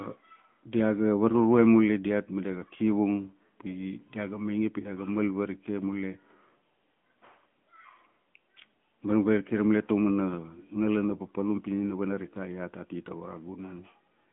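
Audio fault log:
throughout AMR narrowband mobile codec: the speech sits in a 150 Hz to 3.4 kHz band with nothing above 3.7 kHz. Unlike plain telephone filtering, it has a plainly audible buzzy, synthetic edge from being rebuilt from a coarse vocal-tract model, fitting a 10.2 kbps mode.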